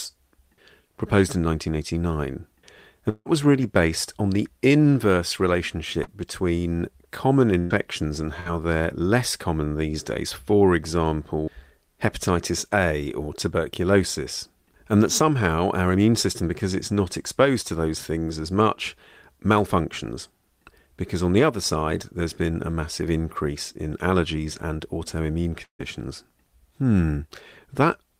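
At 3.09 to 3.27 s, just before "was really based on", the speech breaks in what is likely a long network dropout. For about 160 ms no new audio arrives. The receiver extends the preceding sound as a fading continuation, which trails off into roughly 30 ms of near silence. Speech then resumes further along, and the stretch that never arrived is simply gone.

At 6.03 to 6.09 s, ahead of "between common", a short concealed packet loss removes about 40 ms of the signal. The decoder fills the hole by continuing the last sound for roughly 36 ms and then blends back into the real audio. The result is a brief smear in the speech rather than an audible gap.

Two bursts of packet loss follow. The first, at 7.59 to 7.72 s, loses about 120 ms. The receiver covers it with a held, decaying continuation that never drops to silence before speech picks up again past the missing section. The second, at 8.40 to 8.48 s, just before "they're less common these", loses about 60 ms and produces a shorter fading tail before the audio resumes.

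At 25.64 to 25.81 s there is a second long network dropout, again a likely cause. About 160 ms is missing. Concealment carries the last sound forward as a fading continuation, which ends in about 100 ms of near silence before the speech continues without the lost portion.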